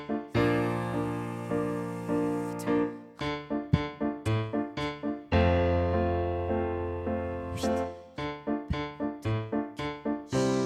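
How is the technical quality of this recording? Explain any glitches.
No glitches or technical faults are audible here.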